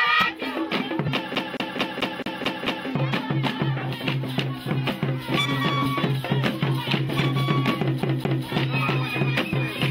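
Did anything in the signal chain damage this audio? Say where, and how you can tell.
Yes, two separate problems. The first is at the codec or decoder stage. At 1.07 s, 7.18 s and 9.52 s the sound jumps forward, dropping roughly 70 ms, 50 ms and 20 ms respectively. That's about three, two and one frames of 23.2 ms, so it's compressed frames being skipped, either missing or rejected as corrupt.

The second is at playback, and it's a CD stuck on one turn. From 1.35 to 2.88 s the same 218.5 ms chunk plays seven times, and from 8.02 to 8.46 s the same loop length repeats twice. Each repeat ends in a brief mute as the pickup jumps back. That fast, even stutter is the classic mark of a scratch kicking the laser back a track at the same point on every revolution.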